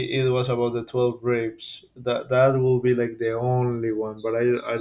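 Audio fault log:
No fault in this speech clip.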